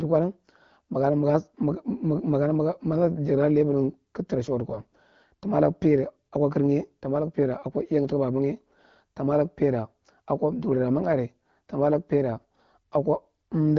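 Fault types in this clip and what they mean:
AMR bit errors: roughly one bit in twenty flipped in weakly protected frame data misplaces excitation pulses and skews gain and spectrum, so for about 0.18 s after "tara suwatu" speech turns gargly and scratchy but keeps pitch and level, without the gap or repeat of packet loss.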